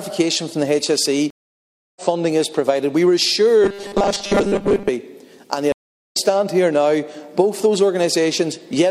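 From 1.30 to 2.02 s there is a stream reconnect: the connection drops, about 0.66 s of silence follows, and a fresh decoder picks up the stream roughly 0.7 s further on. Content is skipped rather than delayed. Between 3.62 and 4.90 s the sound turns into a rigid metallic buzz at 200 Hz, the robotic sound from repeated short buffers. A 5 ms slice is replayed while most of the real audio, around 70 percent, is skipped, likely because new data arrives too seldom. A second reconnect runs from 5.72 to 6.17 s, with about 0.4 s of silence before playback resumes roughly 0.2 s later in the stream.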